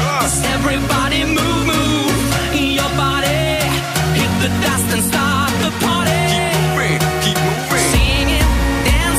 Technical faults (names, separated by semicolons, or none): none